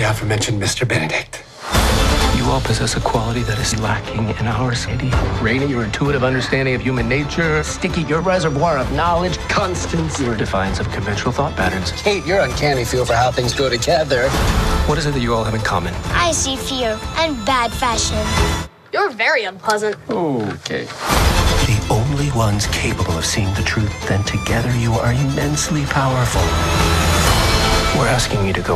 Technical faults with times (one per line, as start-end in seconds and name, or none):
3.93-11.61 de-emphasis applied wrongly
4.87 compressed frames skipped
14.33 compressed frames skipped
21.65 compressed frames skipped